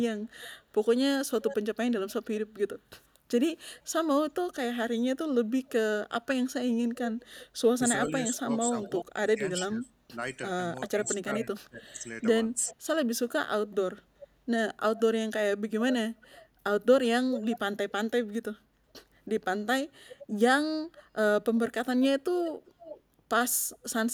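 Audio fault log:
0.24–1.56 s, 3.74–3.80 s, 7.41–9.05 s, 11.07–17.92 s, 19.88–23.79 s, echo leak: a delayed copy of the speech trails it by 382 to 391 ms, ranging from about 10 dB below the speech down to barely audible. The likely cause is a far-end loudspeaker whose echo canceller let part of the pickup return.
7.78–12.73 s, speech suppressed in double talk: while the other side talks, the speech dips and drops out in pieces, by as much as about 30 dB and for around two seconds in total. The likely cause is an echo canceller that attenuated the real talker along with the echo.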